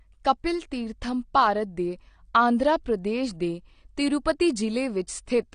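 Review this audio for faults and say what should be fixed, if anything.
The speech has AAC compression damage running the whole way through, and it's plainly audible. Nothing comes through above about 9.7 kHz, so the top end is chopped off and everything sounds dull, with a smeared, fizzy edge on the sibilants. That's likely AAC-LC squeezed to a low bitrate, which fits something around 32 kbps: the encoder drops the highest bands and coarsely quantises the rest to save bits. To prevent it, export from the original at a much higher bitrate or in a lossless format.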